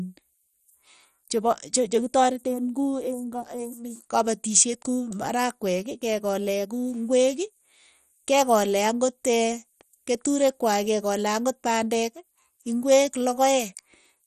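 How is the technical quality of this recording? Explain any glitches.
The technical quality is poor: the speech carries heavy compression damage from start to finish. The damage sounds like MP2 compression, likely from encoding at a low bitrate near 56 kbps. Layer II divides the spectrum into 32 sub-bands and rations bits among them, so starved upper bands drop out and the remaining ones are coarsely quantised. The result is dull, gurgling and granular. A spectrogram shows a hard ceiling at 13.9 kHz, with patchy bands flickering on and off beneath it.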